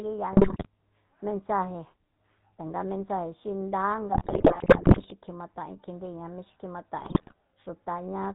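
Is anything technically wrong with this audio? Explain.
Yes. The speech carries two technical faults.

The whole clip passes through the GSM full-rate codec. The damage is plainly audible, and the character fits the 13 kbps full-rate coder. It models the vocal tract as a filter and drives it with a sparse, regular pulse train. Much of the fine detail of the excitation is thrown away. Nothing above 4 kHz gets through. The result is a dull, band-limited sound with a buzzy, gravelly roughness.

GSM bit errors strike three times: 0.32 to 0.66 s, 4.12 to 5.12 s just after "tanga mensaje xi nda", and 7.00 to 7.34 s just after "mí xi". Corrupted bits reach the decoder and scramble its filter, pitch and gain values. Each hit frame then gets a bent spectrum or a jump in level. The sound breaks into squawks, pops and gargling. The middle burst is the longest, at a full second.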